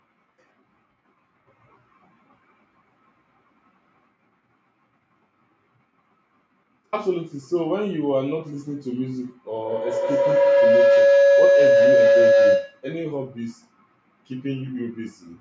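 A speech recording picked up a feedback howl from 9.5 s to 12.94 s, when two devices in the same room on one call formed a loop that gained level on each pass. The tone builds near 500 Hz, with repeats about every 150 ms, and peaks about 10 dB above the speech.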